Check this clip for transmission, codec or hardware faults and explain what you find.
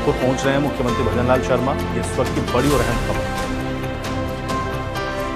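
Two skips are audible, at 2.81 s and 3.95 s, each a jump in the sound. This points likely to a dropped buffer (overrun): samples were overwritten before being read, and the surrounding audio was spliced directly, losing roughly 20 ms and then a few milliseconds.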